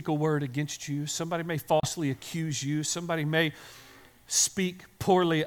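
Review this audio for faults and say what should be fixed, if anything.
At 1.80 s the speech cuts out and stays silent until 1.88 s, a hole of about 80 ms, after which it picks up just before "accuse you" as though it had kept running underneath. This is a likely Bluetooth dropout: audio packets reached the headphones too late and were discarded, which fits a couple of lost packets, so the output fell silent until good data arrived. To prevent it, keep the headphones close to the source with a clear path, away from competing 2.4 GHz traffic.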